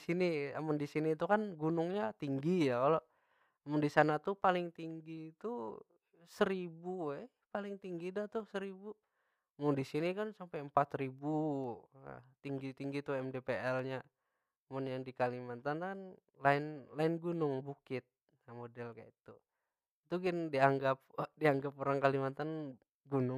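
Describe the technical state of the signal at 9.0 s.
At 9.0 s the speech sits inside a run of clock drift buffer slips that lasts from 0.87 s to 22.42 s. A click recurs every 1.08 s while signal is present. The likely cause is two devices running on independent clocks about 150 ppm apart, so the buffer between them gradually overfills or drains until a few samples are dropped or repeated. This happens around twenty times across the span.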